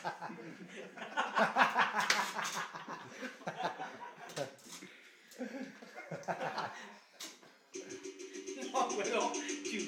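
No technical faults are audible.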